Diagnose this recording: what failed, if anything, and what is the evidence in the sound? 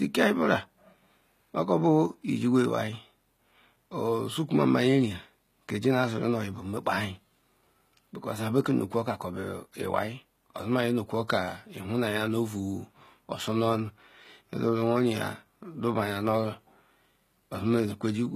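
The codec stage likely applied HE-AAC compression at a rate fitting about 20 kbps. Replicated treble leaves sibilants gritty and metallic throughout, with nothing above 14.9 kHz.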